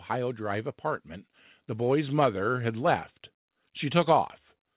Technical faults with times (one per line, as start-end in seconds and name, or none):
1.67-3.06 automatic gain rising